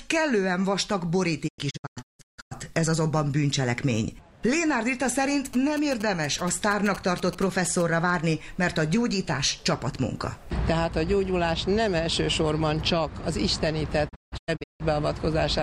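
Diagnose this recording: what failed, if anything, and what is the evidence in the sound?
The sound fades out in 20 ms ramps into several short holes, up to 160 ms each, from 1.47 to 2.53 s (about 0.7 s lost) and from 14.08 to 14.82 s (about 0.48 s lost). This is a digital broadcast dropout: the receiver muted frames that failed checksum.

A galloping ticking buzz at 217 Hz runs from 5.53 to 7.82 s, roughly 15 dB below the programme. These are GSM signalling bursts: a nearby 2G phone's radio bursts were rectified in the analogue wiring and demodulated into the audio path.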